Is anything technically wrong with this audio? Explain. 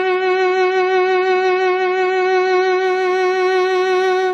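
Yes. The music opens with an adaptive stream starting at a low bitrate, from 0.0 to 2.84 s. The player began on a cheap rendition to start quickly, then switched to a richer one once it had gauged the connection. Until the switch, the sound is dull and smeared, with nothing above 8.2 kHz, which fits AAC at roughly 24 kbit/s. At 2.84 s the treble returns abruptly, consistent with a step to around 96 kbit/s. A spectrogram shows a flat ceiling at 8.2 kHz that fills in at that instant, while the waveform shows no gap.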